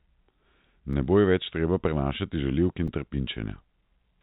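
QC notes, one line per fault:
0.93 s and 2.88 s, block of digital silence: gaps of about 1.5 ms and 3 ms, fitting 64- and 128-sample unfilled buffers, click as ticks; waveform shows flat near-silent runs, spectrogram thin vertical stripes.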